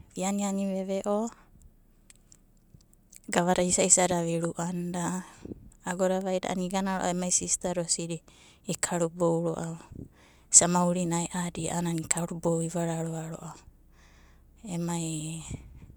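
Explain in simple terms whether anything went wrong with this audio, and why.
Nothing went wrong here; the speech comes across steadily the whole way, with no hiccups or glitches to point to.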